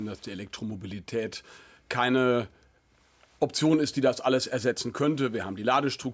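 Nothing stood out on listening.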